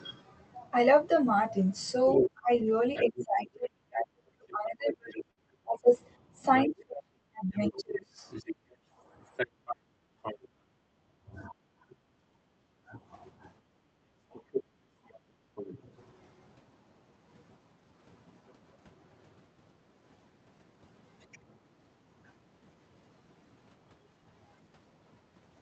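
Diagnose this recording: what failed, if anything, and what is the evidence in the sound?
Call processing, echo cancellation: a second voice, the other side's voice leaking through, sits under the talker from 2.06 to 10.38 s at roughly 5 dB below the speech. It returns from 14.33 to 15.79 s at about 10 dB down, and briefly at 21.21 to 21.38 s, faint at around 30 dB down. The likely cause is the device's loudspeaker feeding back into the microphone, with the canceller leaving a residual it failed to model and subtract.

Call processing, double-talk handling: the talker's own level collapses while the far side is active, from 2.22 to 8.21 s, dipping by as much as roughly 35 dB across about 4 s of affected audio. It happens again from 11.45 to 12.98 s, by up to roughly 25 dB over under a second. This is speech suppressed in double talk. The likely mechanism is the canceller treating near-end speech as echo and attenuating everything together.

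Network and jitter buffer: a burst of packet loss at 5.31 to 5.39 s. The receiver covers about 53 ms by extending the last decoded sound and fading it, heard as a brief held buzz or hiss. Playback then resumes roughly 60 ms further on, so that stretch of material never arrives. The pattern fits a few consecutive Opus packets lost or arriving too late for concealment to do anything better than fill the gap.

Call processing, echo suppression gate: the room tone drops out from 8.54 to 11.17 s by about 13 dB and again from 13.62 to 15.55 s by about 16 dB. Each dip follows loudspeaker activity and recovers once the canceller releases. This is background gated by the echo canceller, a hard attenuation applied to the microphone whenever far-end playback is detected, pulling the ambient bed down with it. The output comes through an Opus path band-limited to 8 kHz.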